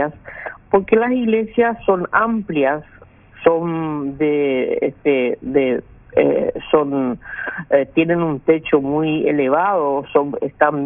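Throughout, the high end sounds gritty and metallic, with harsh tones that don't belong to the sound, and the spectrum stops abruptly at 3 kHz. This is aliasing: the audio was downsampled without an anti-aliasing filter, apparently from 44.1 kHz to 6 kHz, so content above 3 kHz folded back into the band, roughly 20 dB below the main signal.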